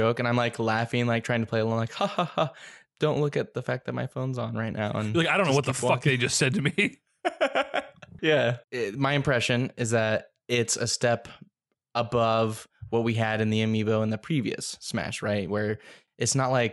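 Nothing in the recording catches the ear as a technical problem, and the speech simply runs its course without anything worth flagging.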